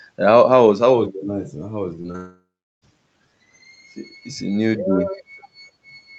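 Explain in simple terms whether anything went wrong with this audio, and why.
Something went wrong just after two seconds. From 2.01 to 2.16 s there are three quick hiccups of short concealed packet loss, at 2.01, 2.07 and 2.12 s. Small pieces of the speech arrived too late. The receiver patched each gap by stretching the sound before it, so you hear tiny smears or wobbles.

Then a long network dropout follows, from 2.16 to 2.84 s. The sound trails off into a fading buzz or hiss. For about a third of a second near the end there is only silence. The likely cause is the connection stalling, so that stretch of speech is simply gone.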